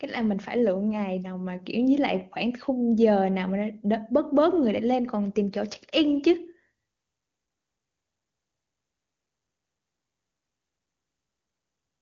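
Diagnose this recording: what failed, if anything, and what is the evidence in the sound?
Nothing failed: the speech stops at about 7.4 kHz, as expected from an AMR wideband (HD Voice) codec path at a rate that fits its top 23.85 kbit/s mode, with no more than faint coding damage audible.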